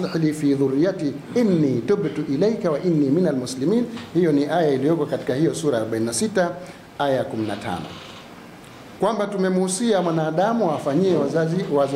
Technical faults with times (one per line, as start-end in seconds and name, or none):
none